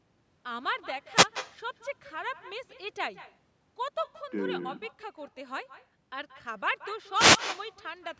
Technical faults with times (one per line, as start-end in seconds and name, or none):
0.00-8.20 echo with no canceller
1.14-1.27 wireless microphone noise hit
7.14-7.40 wireless microphone noise hit